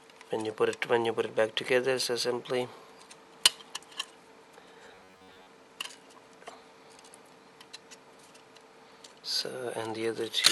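From 4.86 to 5.47 s the sound collapses into a stiff, metallic buzz locked at 93.8 Hz. This is robotic sound from repeated short buffers, likely a starved stream looping its last 10.7 ms, so roughly half the audio goes missing.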